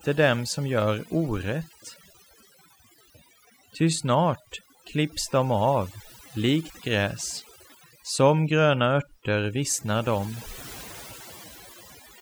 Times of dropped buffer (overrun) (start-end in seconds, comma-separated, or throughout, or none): none